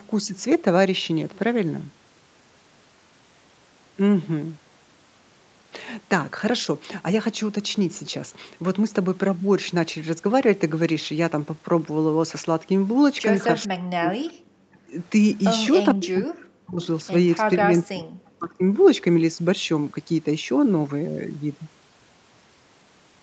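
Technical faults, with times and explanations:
13.67–14.95 s, 15.94–16.88 s and 17.57–18.63 s: speech suppressed in double talk. In each stretch the speech dips sharply or breaks into fragments, with the deepest drops around 40 dB, for roughly a second each time. The likely cause is an echo canceller that could not tell the near talker from the far side's loudspeaker echo while both spoke, so it turned everything down. On a waveform the envelope collapses in chunks. On a spectrogram the energy thins or blanks out below the call path's 8 kHz ceiling.
16.82–16.87 s: echo leak. A faint scrap of delayed sound, about 25 dB below the speech and lagging it by 444 ms, slips through just as the second suppressed stretch ends. It is likely residual loudspeaker echo that the far end's canceller failed to remove and sent back down the line. On a spectrogram it shows as a brief, weak copy of earlier harmonic patterns displaced in time. 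In the waveform it is a tiny blip riding under the main signal.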